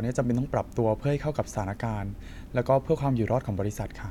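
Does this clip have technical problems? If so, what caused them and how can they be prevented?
No, there are no technical problems to report here.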